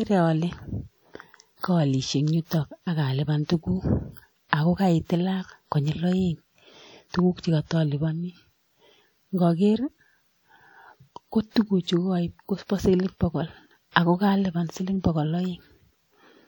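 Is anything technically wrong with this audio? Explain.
Yes. The whole clip has plainly audible WMA compression damage, so the speech sounds ringing and washy from start to finish, with a hiss that swells and fades along with the talking. That's most likely from a transform codec like WMA run fairly hard: its long blocks smear quantisation noise over tens of milliseconds, and the thin detail points to a bitrate around 48 kbps. The top end still reaches about 20.1 kHz.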